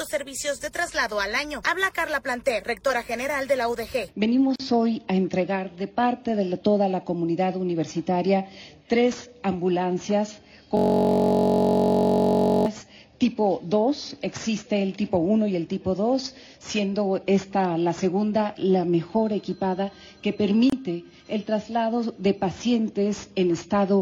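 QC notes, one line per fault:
4.56–4.60 s and 20.70–20.72 s, gap at a join of encoded pieces: continuous sound drops to silence for about 40 ms and then about 26 ms, with edges smeared by the codec, then resumes exactly where it stopped. This points to separately encoded segments joined without trimming. The encoder's start-up delay and the padding on each segment's final frame were both kept, leaving a short dead patch at each seam.
10.77–12.66 s, system hang loop: a single 21.33 ms slice of audio repeats exactly, 89 times over, for roughly 1.9 s. The result is a steady buzz at 46.9 Hz rather than a stutter, because the looped piece is so short. The host or driver stalled while the audio hardware kept cycling through its ring buffer, and the loop length fits a 1024-sample buffer.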